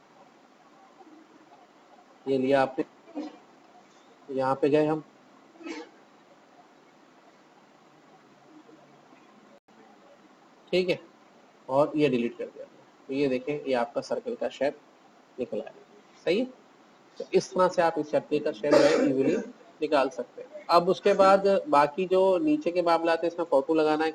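At 2.81 to 2.83 s the audio makes a skip ahead: roughly 0.7 s of material is lost and playback jumps straight to later audio with no fill and no audible gap. The two sides of the cut are butted together, so the sound lurches forward abruptly. Audio was dropped while newer audio was already queued, which cut the playout delay by about the same 0.7 s.

From 2.90 to 3.93 s a jitter buffer speed-up follows. The receiver is still holding more audio than its target, so it trims short pitch-period-sized pieces repeatedly, removing roughly 100 ms in total. The sound runs at about 111 % of normal speed while the pitch stays unchanged, giving a brief hurried, compressed quality just after the jump before normal pacing resumes.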